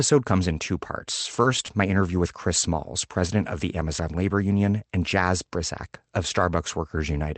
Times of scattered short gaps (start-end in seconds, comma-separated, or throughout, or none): 1.21-2.16